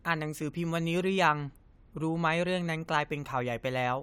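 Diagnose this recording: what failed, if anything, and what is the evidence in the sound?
Nothing failed at any stage: the speech signal arrives continuous and intact, with no interruptions, distortion, level jumps or timing errors anywhere in the recording.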